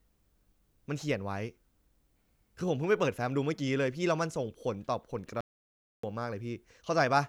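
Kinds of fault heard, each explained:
Playback stall: the speech cuts to silence from 5.41 to 6.03 s, about 0.63 s, likely because the player ran short of data before resuming.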